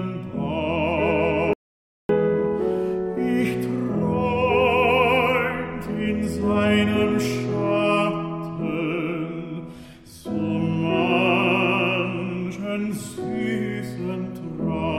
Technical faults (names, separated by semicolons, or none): audio dropout to silence